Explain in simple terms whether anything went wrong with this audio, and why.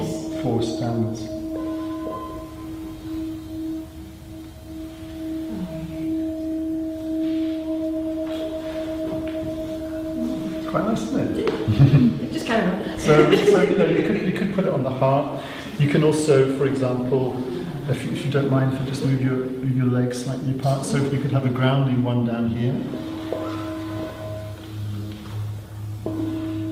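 Nothing went wrong here: the signal holds steady the whole way, with no breaks, jumps or damage to the sound that a listener would notice.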